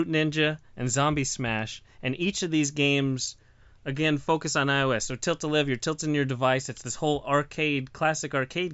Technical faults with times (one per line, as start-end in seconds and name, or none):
none